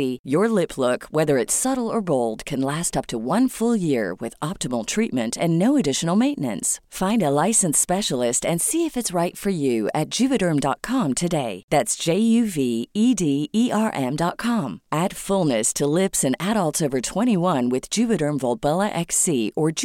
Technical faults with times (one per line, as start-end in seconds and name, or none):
none